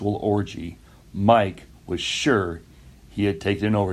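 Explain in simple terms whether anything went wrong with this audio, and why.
Nothing went wrong: listening through the whole speech recording, I hear no dropouts, clicks, distortion, glitches or other technical faults anywhere in it.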